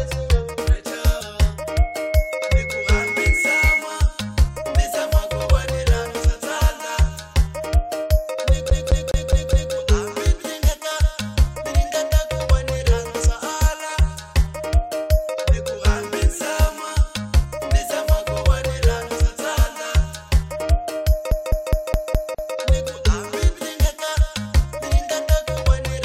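Damaged data in the compressed stream at 1.2 s: a corrupted frame makes the decoder lose sync and resync on the next header, producing a brief glitch. Loudspeaker feedback squeal from 1.71 to 3.85 s: the microphone-to-speaker loop exceeds unity gain at 2.2 kHz, so a single tone swells over about two seconds to a few decibels above the audio. CD stuck on one turn from 8.70 to 9.74 s and again from 21.31 to 22.55 s: the pickup jumps back every 207 ms, repeating the same fragment five and then six times with short mutes at each jump.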